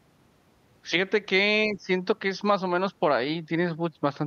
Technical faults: speech suppressed in double talk

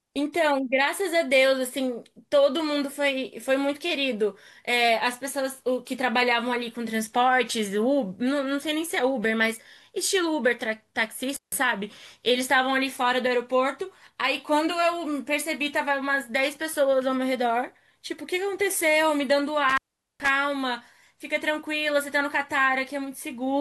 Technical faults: intermittent contact

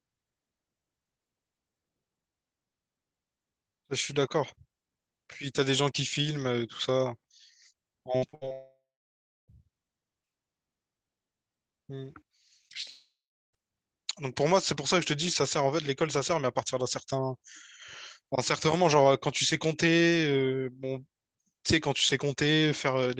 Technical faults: repeated packet loss (robotic sound); long network dropout

